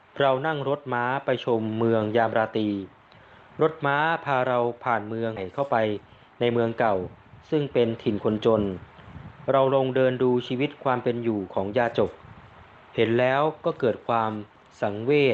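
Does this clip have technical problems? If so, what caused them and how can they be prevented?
Yes. At 5.36 s a skip ahead occurred: a stretch was discarded while later audio was queued, so playback jumps forward, losing about a fifth of a second with no gap. Prevention: size the jitter buffer to absorb delivery bursts so it never overflows and drops queued audio.

From 5.45 to 6.52 s a jitter buffer speed-up follows: holding too much audio, the receiver trimmed pitch-period slices, running about 11% fast at unchanged pitch and sounding hurried. Prevention: smoothing network jitter keeps buffer depth near target, avoiding aggressive catch-up compression.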